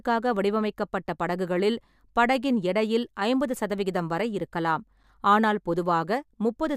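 No technical faults detected.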